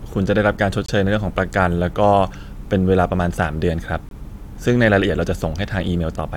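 At 0.86 s and again at 4.09 s the speech drops into abrupt silence for about 30 ms each time, consistent with a corrupt frame muted: the decoder rejected damaged compressed data and substituted silence. Each gap fits a single frame, and timing continues unshifted afterwards.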